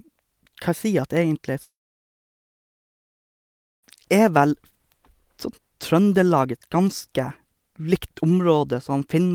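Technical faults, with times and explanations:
1.63–3.85 s, long network dropout: likely packets stopped arriving; the receiver fills about 2.2 s, a brief fading buzz then near-silence, showing as a blank gap on the spectrogram.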